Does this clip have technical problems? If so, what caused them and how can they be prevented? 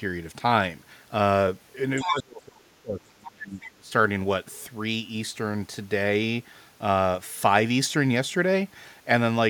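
Yes. From 1.97 to 2.14 s, the other side's voice leaks through, only slightly quieter than the talker. The likely cause is loudspeaker playback the echo canceller failed to remove. Using a headset, or lowering the speaker volume, prevents this leak.

From 2.03 to 3.92 s, the talker's speech is suppressed in double talk. It drops sharply, by a large amount at its deepest, for about two seconds. Both sides were likely talking at once, and the echo canceller turned everything down. A headset, or an echo canceller with better double-talk handling, prevents this.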